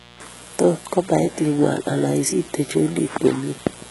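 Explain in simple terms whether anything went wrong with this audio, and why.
Two problems run through the whole recording, from start to finish.

The first is mains buzz: a steady, raspy hum underneath the speech. Electrical interference from the 60 Hz power supply leaked into the signal, bringing a stack of sharp overtones with it. It sits fairly low under the voice.

The second sounds like heavy data compression, most likely HE-AAC. This method stores only the lower frequencies properly and fakes the treble by copying lower sounds upward. As a result, s sounds come out gritty or lispy, and nothing survives above about 11.4 kHz.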